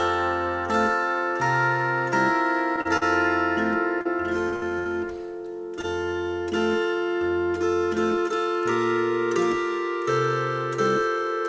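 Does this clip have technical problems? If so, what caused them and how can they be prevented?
Yes. Around 2.81 to 2.88 s and again at 5.81 to 5.86 s, the sound hangs for a moment with a faint buzzy dip, as if briefly held in place. These are short stalls from a late packet. The jitter buffer ran dry, and the receiver stretched the last sound by 38 ms and then 23 ms until the data arrived. Nothing was lost, but playback delay grew by those amounts. A jitter buffer with a little more headroom, or steadier network timing, would prevent this.

Just after, from 2.97 to 3.04 s, there is a quick smear or wobble. This is short concealed packet loss. About 40 ms of audio never reached the decoder, so the receiver papered over the hole by extending the preceding sound for roughly the same length, then blended back into the real signal. Enabling forward error correction or redundant packets would let the receiver rebuild such isolated losses instead of guessing.

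From 4.01 to 4.88 s the audio turns choppy, with pieces dropping out. This is repeated packet loss, the robotic-sound pattern. Four separate gaps struck in quick succession, the longest about 65 ms, totalling around 160 ms of missing audio. Each was patched by continuing the last sound, so about a fifth of that stretch is synthetic fill. Stronger loss protection such as FEC, plus a less congested or more reliable connection, would prevent this.

The WebRTC call path itself carries nothing above 8 kHz, which fits the G.722 codec in use.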